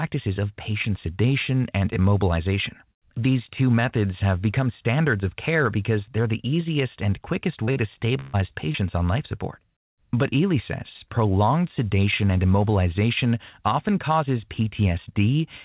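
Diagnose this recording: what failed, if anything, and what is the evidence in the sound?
A block size mismatch (truncated) sits at the driver or buffer stage. A steady buzz at 100 Hz runs through the whole clip. That rate fits a block period of about 10 ms. One stage writes blocks longer than the next stage reads, so the tail of each block is dropped. Every cut leaves a small discontinuity, and those repeat as the buzz. The size difference is tiny, so the speech plays at its normal speed and pitch.

Short concealed packet loss comes from the network stage. There are four events, at 7.64 to 7.69 s, 7.71 to 7.78 s, 8.47 to 8.52 s and 8.72 to 8.76 s. Each is a brief smear or wobble. The receiver missed 20 to 40 ms of audio each time. It extended the last sound, for 18 to 41 ms, then blended back into the real signal. Short consonants in those spots can disappear.

A burst of packet loss, also at the network stage, runs from 8.20 to 8.35 s. 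About 140 ms went missing in a row. Concealment filled the whole gap, with no silence. The last sound is stretched and fades, as a held buzz or thinning hiss. Speech then resumes further on, and the part in between is gone. The G.711 call codec band-limits everything to 4 kHz, and that band limit doesn't hide these gaps.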